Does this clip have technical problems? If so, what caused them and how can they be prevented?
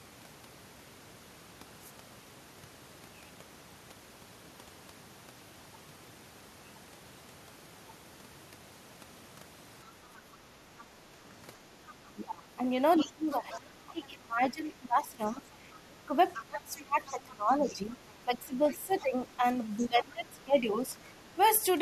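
Yes. Faint scraps of the other side's voice leak through at 11.87–11.93, 12.96–13.57, 15.26–15.79, 16.34–17.13, 17.66–18.11, 18.69–18.75 and 19.83–19.87 s, about 15 to 30 dB below the speech, likely because the echo canceller left loudspeaker residue in the microphone. Using a headset or a better-tuned echo canceller would keep it out.

From 12.01 to 21.16 s the speech itself repeatedly dips, by up to about 20 dB and for around seven seconds in total, while the other side talks. This is speech suppressed in double talk, likely caused by the echo canceller turning down both voices at once. An echo canceller with better double-talk detection, or a headset that removes the echo path, would prevent it.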